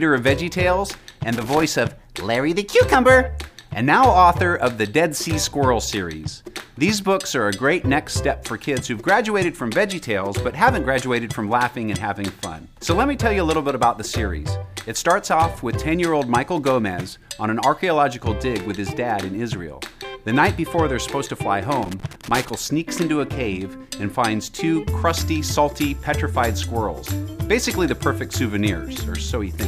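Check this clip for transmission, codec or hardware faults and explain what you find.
There's one hardware fault here, loose connector crackle, and it turns up twice: from 1.32 to 1.63 s, and again from 21.83 to 22.50 s. A worn or dirty contact somewhere in the chain is making and breaking as it shifts, so the signal gets chopped in and out in quick succession. Any DC sitting on the line adds little pops each time the circuit reconnects. You hear it as a ragged, irregular burst of scratchy crackle, the second one lasting about twice as long.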